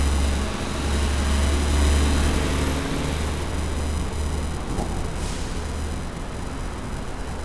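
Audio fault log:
Nothing stood out on listening to these sounds.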